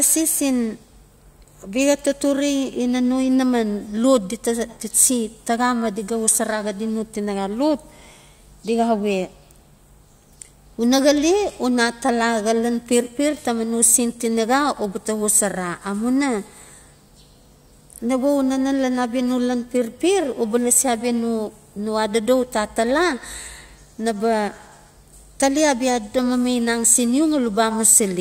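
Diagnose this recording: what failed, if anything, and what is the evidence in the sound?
Nothing failed: at no stage from capture to playback does the speech show any audible defect.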